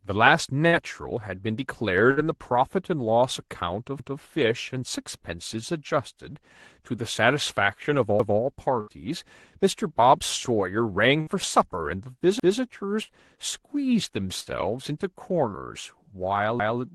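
Bursts of packet loss at 0.67 and 2.11 s drop about 60 ms of audio each; concealment stretches the last sound into a brief fading fill before the speech resumes further on. From 4.0 s, overlapping chunks cause each new 4-second chunk to start 200 ms early, so that stretch plays twice as a stutter. This happens again at 8.2 s. Further packet-loss bursts at 8.81 and 11.21 s leave the same short held-then-fading fill. The chunk overlap repeats at 12.4 s, and packet loss hits again at 13.03 and 14.41 s. The final doubled 200 ms join comes at 16.6 s. Throughout, the call codec's coding noise and a top end ending near 12 kHz can be heard.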